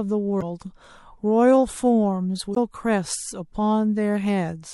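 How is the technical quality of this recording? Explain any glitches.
The technical quality of this speech recording is poor, with plainly audible codec damage and two brief glitches.

Throughout, the speech sounds watery and swirly, with dulled treble and smeared consonants, likely from MP3 compression at a low rate, which fits 64 kbps. Starved of bits, the encoder cuts high frequencies and lets weak components flicker between frames. Unlike plain low-pass filtering, the sound keeps shifting.

At 0.38–0.43 s and 2.52–2.57 s, damaged data in the compressed stream produces short glitches. The decoder misreads corrupted frames, loses sync and skips to the next frame header.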